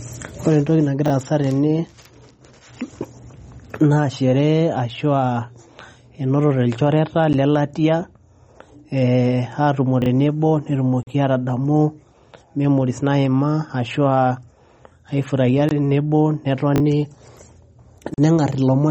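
MP3 compression runs through the whole clip: the speech has a watery, swirling quality, and nothing is present above 15.1 kHz. That points to a likely low-bitrate MP3 encode, around 32 kbps, where weak frequency lines flicker on and off between frames.

Chunks out of order occur at 1.06–1.10 s, 10.02–10.06 s and 16.76–16.80 s. Each time, a 20 ms chunk plays one chunk late, after the chunk that should follow it. Nothing is lost, but the hard joins make a brief jumbled stutter.

Blocks of digital silence occur at 7.33 s (10 ms), 11.03–11.07 s (40 ms), 15.69–15.71 s (20 ms) and 18.14–18.18 s (40 ms). In each, samples were zeroed with no fade. The shortest is a tick, and the longer ones are short holes in the sound.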